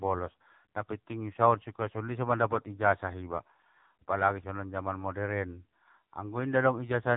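From start to finish the speech has the AMR narrowband mobile codec sound: nothing survives above about 3.8 kHz, and the heavy damage makes the voice buzzy and synthetic, which fits a low mode around 6.7 kbps rebuilding speech from a vocal-tract model and sparse pulses.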